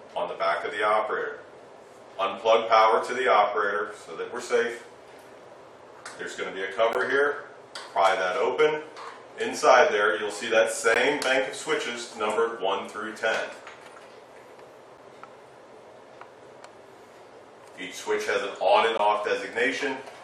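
Short hard-edged silences at 6.93, 10.94, 14.98 and 18.98 s (about 17, 16, 8 and 17 ms) are gaps between stream segments, falling on 2 s segment boundaries. Unlike a dropout, nothing is removed; the sound resumes exactly where it stopped.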